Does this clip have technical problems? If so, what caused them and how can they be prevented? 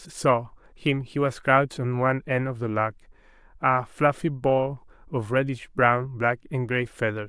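No, this speech clip has no technical problems. Since there is nothing to trace back to a cause, nothing needs preventing here.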